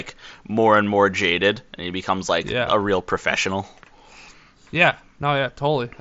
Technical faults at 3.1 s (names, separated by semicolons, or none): none